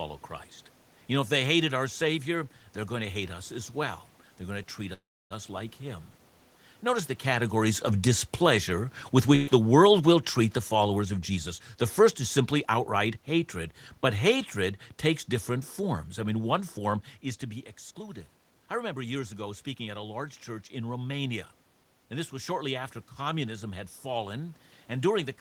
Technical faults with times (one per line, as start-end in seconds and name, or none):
4.93-5.33 call audio freeze
6.84-14.84 automatic gain falling
9.35-9.49 burst of packet loss
10.99-13.23 jitter buffer speed-up
17.91-20.05 jitter buffer speed-up